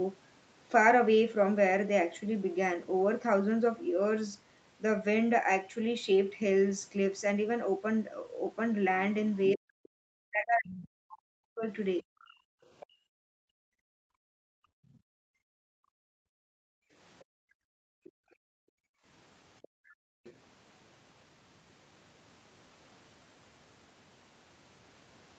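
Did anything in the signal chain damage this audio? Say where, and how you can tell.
Yes. Other side's voice leaking through at 9.42–11.17, 12.21–12.87, 17.19–18.11 and 19.62–20.33 s: a faint second voice, roughly 20 to 30 dB under the talker. This is call processing, likely a loudspeaker echo that the echo canceller never fully subtracted.

Speech suppressed in double talk, 9.53–12.07 s: the talker's level collapses in pieces, by as much as about 40 dB over roughly a second and a half. This is the echo canceller in call processing. While both sides overlapped, it likely attenuated the near voice along with the echo.

Background gated by the echo canceller, 12.35–20.24 s: the room tone drops away, by about 37 dB at worst and for around 7 s in total, and returns when the canceller lets go. In call processing, the canceller clamps the microphone whenever the loudspeaker is active. The Opus path's 8 kHz bandwidth is also audible here.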